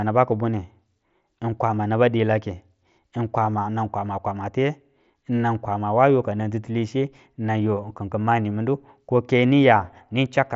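No technical faults occur in this speech, which comes through a Bluetooth mSBC headset link with nothing above 7.7 kHz.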